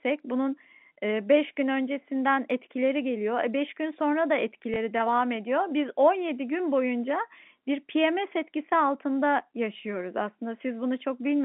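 At 4.74 to 4.76 s, a brief small blip is the packet loss with last packet repeated fault. About 20 ms of audio went missing, which fits a single lost packet, and the receiver filled the gap by replaying the previous packet. Unlike a plain dropout, there is no silent gap, only a hiccup of repeated sound, too short to build into a buzz. The telephone band, 150 Hz to 3.6 kHz from G.711, frames it.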